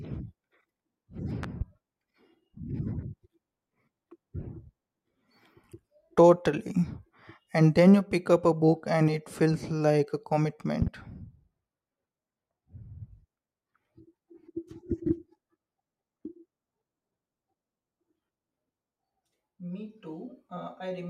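Two loud pops land in this speech, the first at 1.43 to 1.64 s and the second at 10.82 to 10.90 s. Each is a double hit, two sharp thumps in quick succession, jumping roughly 10 dB above the talking while the speech carries on underneath. That's the signature of a sudden voltage spike, likely from a plug, a switch or static, getting into the chain and then being shaped by the circuitry downstream.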